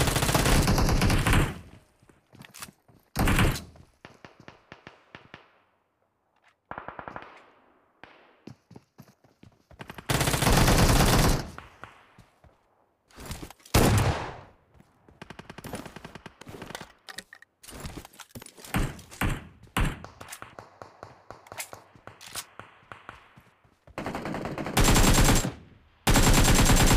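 No technical faults are audible.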